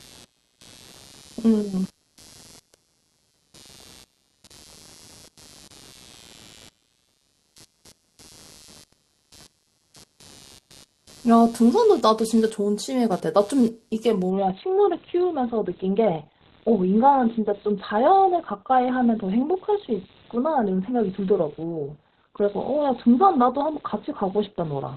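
A speech recording with two faults. Computer activity noise runs throughout: a buzzy, chirping pulse at around 150 Hz, roughly 30 dB below the speech, that rises and falls with the machine's processing load rather than with the speech, which marks it as ground contamination from the computer rather than mains hum. At 14.3 s the adaptive stream switches to a lower bitrate and stays there to the end. The speech abruptly loses everything above 4.2 kHz and takes on a smeared codec quality, which fits a drop from roughly 64 to 12 kbit/s Opus. There is no gap or dropout at the switch, which separates it from a network stall.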